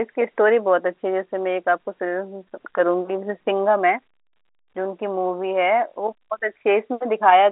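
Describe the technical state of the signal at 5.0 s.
At 5.0 s the speech comes through intact, carried in the narrow 300 Hz to 3.4 kHz band of G.711 telephone coding with no fault to be heard.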